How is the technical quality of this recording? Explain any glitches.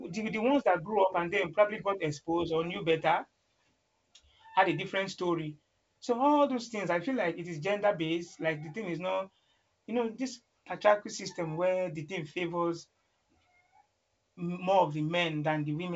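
Nothing stood out on listening to this speech recording, which carries the band limit of G.722 wideband telephone coding, with nothing heard above about 7.7 kHz.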